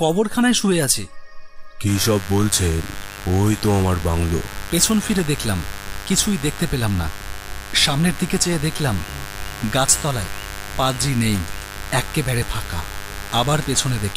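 A steady, raspy mains buzz, fairly prominent beneath the audio, enters at 1.86 s and lasts to the end; its 50 Hz harmonics reach into the kilohertz range, so unlike smooth hum it rasps.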